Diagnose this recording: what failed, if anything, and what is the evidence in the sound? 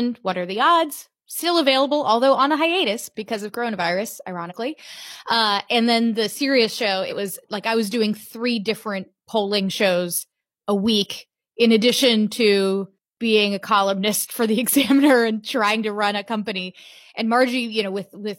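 The fault is damaged data in a compressed stream, at the codec stage. Two short glitches break the speech. The first runs from 4.46 to 4.53 s, just after "hiatus because of coronavirus". The second runs from 7.06 to 7.12 s, between "then the serious show" and "was like I was". Each lasts about 60 ms. Corrupted bytes made the decoder misread those frames and lose sync. It then hunted for the next valid frame header.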